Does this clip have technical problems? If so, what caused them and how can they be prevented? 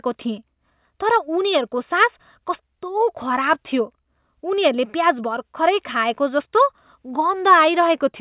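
No, there are no technical problems in this clip.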